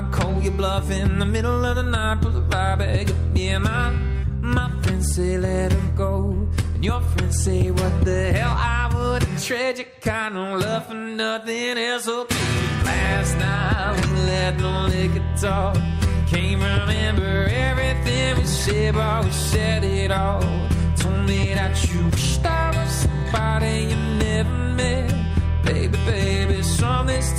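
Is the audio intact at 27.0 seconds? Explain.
Yes, the audio is intact at 27.0 seconds, with no fault at that moment.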